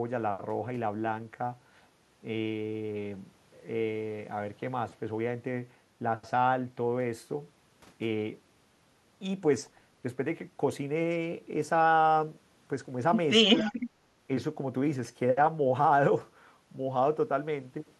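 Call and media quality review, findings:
Speech suppressed in double talk, 13.62 to 13.74 s: brief duck of around 10 dB, about a tenth of a second in total. Likely the echo canceller failing to separate near-end speech from overlapping far-end echo and pulling down near-end speech along with it.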